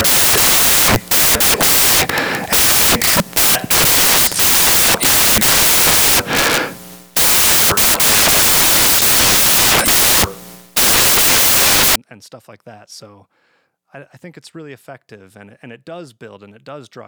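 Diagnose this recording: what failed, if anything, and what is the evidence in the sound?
Sample-format conversion failed: bytes were misassembled into samples from 0.0 to 11.96 s, turning the speech into loud, harsh broadband noise that clears just before "and stuff like that".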